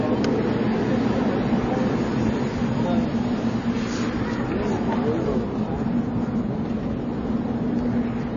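Throughout the clip the audio has nothing above 7 kHz and a plainly audible watery, swirling texture. This is likely MP3 compression at a very low bitrate, around 23 kbps, so the encoder cut the treble and let weak frequency lines flicker between frames.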